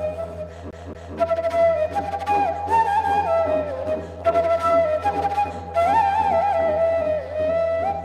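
A scratch on the disc throws the laser back one track at the same spot, so the CD is stuck on one turn from 0.71 to 1.16 s. A 0.23 s slice of sound plays twice, with a brief mute at each jump, giving a fast, even stutter.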